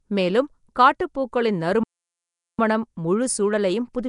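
From the start, the speech appears to have passed through a low-rate block codec, likely Nellymoser Asao, the old Flash microphone codec, at a rate that fits about 44 kbps. It codes short blocks with a fixed, small bit budget, so weak bands get no bits and are filled in with noise. The damage is plainly audible: a rough, hissy halo around the speech and a smeared, underwater quality, with nothing above about 10.7 kHz.

At 1.83 s, just after "மேலும் காட்டுப்பூக்களின்", a playback stall cuts the sound off in mid-flow. The player likely ran out of data or had its thread blocked, and the output went silent until it recovered. The gap lasts about 0.75 s, until 2.59 s, when the speech resumes, either where it stopped or at a later point.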